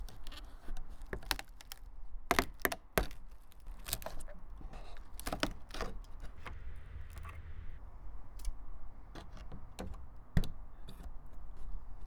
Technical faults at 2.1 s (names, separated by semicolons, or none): sudden gain jump